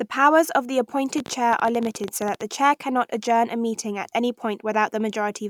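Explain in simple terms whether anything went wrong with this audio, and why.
Yes: right after "powers of the", a rapid, uneven ticking of about twenty sharp pops runs over the speech from 1.18 to 2.42 s, louder than the talking, ending before "the chair cannot adjourn". This train of clicks likely comes from electrical interference or a faulty connection or power supply.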